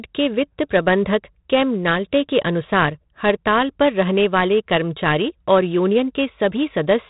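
Speech, and the whole thing has been through 4-bit ADPCM compression. There's a gritty hiss riding on every loud syllable, hard onsets smear because the step size can't adapt fast enough, and nothing survives above 3.9 kHz, which fits an 8 kHz, 32 kbps stream.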